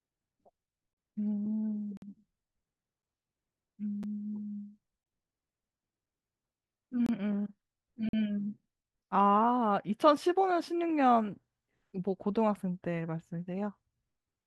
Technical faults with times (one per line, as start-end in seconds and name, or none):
1.97-2.02 gap between stream segments
4.03 gap between stream segments
7.06-7.09 gap between stream segments
8.09-8.13 gap between stream segments